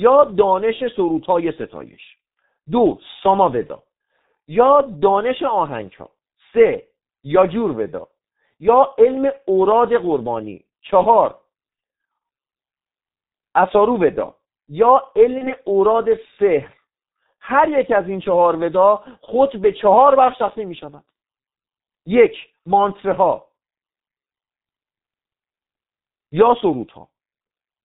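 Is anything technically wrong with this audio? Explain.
Yes. Throughout, the speech sounds muffled and hoarse, with smeared consonants and nothing above 4 kHz. That points to the G.723.1 codec, whose 30 ms frames and slow voice model fit its 6.3 kbit/s mode.

From 15.38 to 15.54 s and from 19.25 to 19.33 s, the voice is briefly stretched and fades. This is VoIP packet loss concealed by the speech codec. In each case it fits a single lost 30 ms frame, where the decoder extrapolated the last pitch while the output took time to recover.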